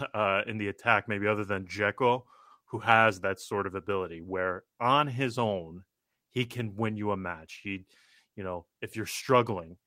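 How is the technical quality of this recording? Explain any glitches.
No technical faults or glitches can be heard at any point in the recording.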